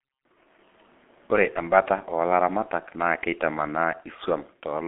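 Throughout, the speech shows heavy G.723.1 codec damage: a hoarse, muffled tone with nothing above 3.7 kHz. Consonants smear across slow 30 ms frames, which is rougher than plain telephone band-limiting.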